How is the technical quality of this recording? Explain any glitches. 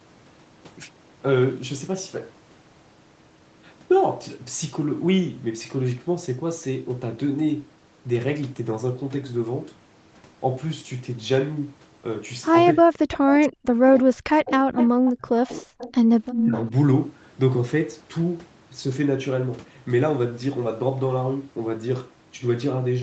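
The trouble sits between 12.8 and 16.6 s, where both ends of the call seem to talk over each other, all heard through a call codec band-limited to about 8 kHz.

Speech suppressed in double talk: at 12.82–12.97, 13.14–15.72 and 16.43–16.55 s the voice dips, by up to about 40 dB, likely because the echo canceller ducked everything during crosstalk.

Echo leak: copies about 350 ms behind the voice appear at 13.10, 14.77, 15.06, 15.78 and 16.31 s, mostly about 15–20 dB down, but about 5 dB down at 16.31 s. They're likely loudspeaker pickup the far-end canceller missed.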